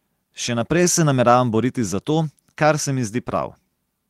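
Nothing stood out on listening to this short speech recording.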